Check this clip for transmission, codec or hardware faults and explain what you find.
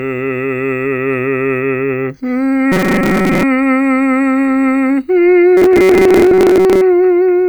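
Two passages of robotic sound from repeated short buffers, from 2.72 to 3.43 s and from 5.57 to 6.82 s. The music turns into a rigid, metallic buzz pitched at 188 Hz. The likely cause is audio arriving too seldom, so a roughly 5 ms slice is looped over the gap, covering about half of the first passage and most of the second.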